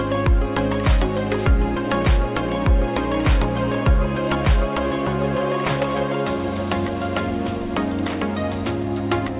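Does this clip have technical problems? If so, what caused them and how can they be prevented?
No, the signal shows no technical faults and needs no corrective or preventive action.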